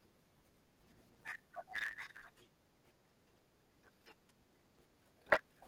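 From start to finish the speech carries a block size mismatch (truncated): the end of every block is dropped, consistent with 512-sample writes, giving a 109 Hz buzz and delivery 1.16 times fast with the timbre unchanged. A spectrogram shows vertical striations every 9.2 ms; the waveform shows matching discontinuities.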